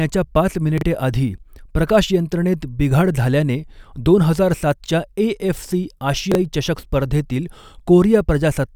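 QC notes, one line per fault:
0.78–0.82 s and 6.32–6.35 s, chunks out of order: a short block of about 12 ms plays three and then two blocks late, just before "आधी प्रकाशयंत्रणेत बिघाड झाल्याने" and between "हजार सातच्या एएफसी" and "चषक स्पर्धेतील". The result is a brief jumbled stutter with hard joins. Unlike a dropout, no sound goes missing.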